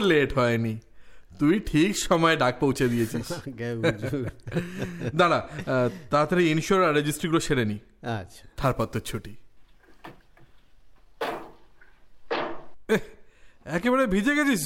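From 8.61 to 11.57 s the converter's sampling clock wanders, a case of sample clock jitter on the order of ten microseconds, so each sample is captured a little too early or too late at random. The timing error turns into amplitude error wherever the waveform is changing fast, leaving a grainy hiss roughly 25 dB below the sound itself. It swells on loud, bright passages and drops away whenever the audio goes quiet.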